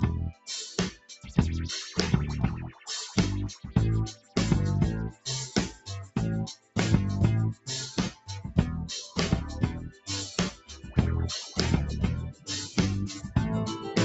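A noise suppressor built for speech stays active on this audio throughout. It treats held sound as noise, so the level pumps by around 10 dB.

The noise suppressor cuts sound at 0.32–1.32, 2.69–4.36, 5.12–6.76, 7.55–8.29, 9.89–10.92 and 12.32–13.36 s. Sustained parts and tails sink, by up to about 20 dB.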